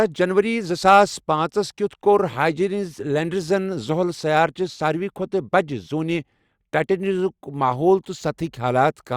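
No technical faults are audible.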